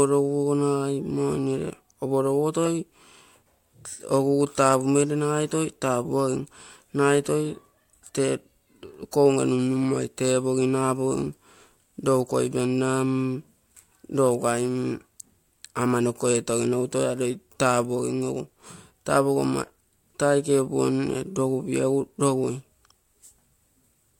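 No technical faults are audible.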